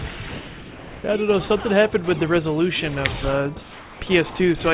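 Audio passed through a call path with nothing above 4 kHz, which points to a narrowband G.711 codec at 64 kbps. From 0.11 to 0.2 s, about 90 ms of the sound vanishes and is replaced by flat, steady noise before the audio returns. This is sound dropped by the voice detector: the sender's detector likely mistook this stretch for background and stopped transmitting, and the receiver filled the 90 ms gap with synthetic comfort noise. From 3.62 to 4.01 s, the background, sitting about 22 dB below the loudest parts, turns smooth and featureless for 390 ms and drops by about 3 dB. This is comfort noise in place of the background. During a pause the sender likely switched to discontinuous transmission, and the receiver substituted generated noise that matches the background's rough shape but loses its detail.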